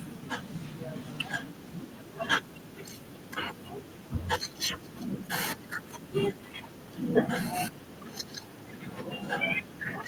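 From 0.0 to 3.31 s, 3.52 to 4.28 s, 4.49 to 4.58 s, 4.75 to 5.28 s, 5.57 to 6.14 s, 6.31 to 7.28 s and 7.71 s to the end, an echo leak trails the speech by 473 ms, roughly 25 dB down. It likely comes from a far-end loudspeaker whose echo canceller let the pickup through. On a spectrogram it shows as a faint, shifted copy of the speech's harmonic pattern.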